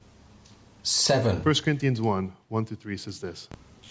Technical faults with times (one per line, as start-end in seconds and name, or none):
none